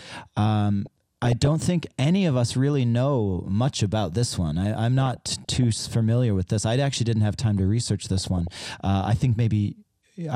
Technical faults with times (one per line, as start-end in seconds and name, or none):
0.86-1.47 DAB burbling
4.99-5.64 DAB burbling
8.18-8.65 DAB burbling